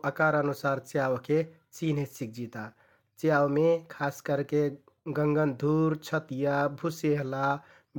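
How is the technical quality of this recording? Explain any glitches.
The technical quality of this recording is good, with no glitches to explain.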